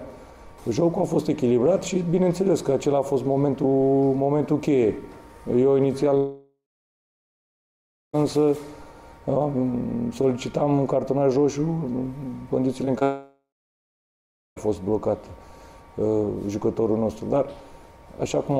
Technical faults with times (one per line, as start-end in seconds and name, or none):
6.17-8.15 long network dropout
12.85-13.03 short concealed packet loss
13.03-14.58 long network dropout